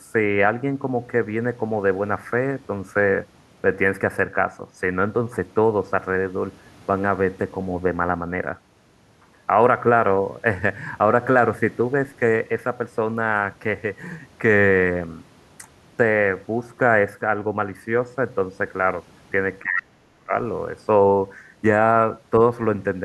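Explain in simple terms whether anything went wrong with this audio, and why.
From 19.62 to 20.33 s the speech breaks up and fades, not as one clean gap: speech suppressed in double talk, likely echo cancelling during overlapping talk.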